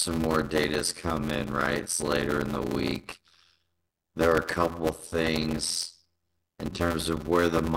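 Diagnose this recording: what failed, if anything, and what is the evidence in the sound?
The failure sits at the driver or buffer stage: a block size mismatch (padded), present throughout the speech. Each block that is read holds less audio than it should, and the remainder is zero-filled. That produces a steady buzz at about 86.1 Hz, which fits a 512-sample read block, and the speech runs at 0.625 times normal speed. A waveform shows regular short gaps; a spectrogram shows evenly spaced vertical stripes and harmonics of 86.1 Hz.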